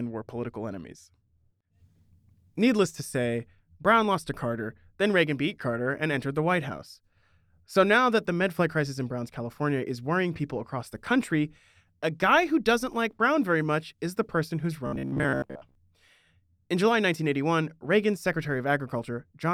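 From 14.87 to 15.75 s the speech turns into a rigid, metallic buzz near 66.7 Hz, still loosely tracking the words. This robotic sound from repeated short buffers likely comes from a 15 ms chunk being replayed to fill gaps, skipping most of the real audio.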